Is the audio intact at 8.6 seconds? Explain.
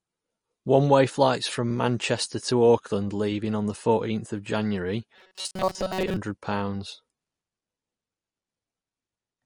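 No. At 8.6 s the speech carries plainly audible damage that runs through the whole clip, likely from MP3 compression at a low bitrate around 40 kbps. Starved of bits, the encoder drops weak frequency lines that flicker between frames, giving a watery, swirly texture. A spectrogram shows patchy holes in the frequency content.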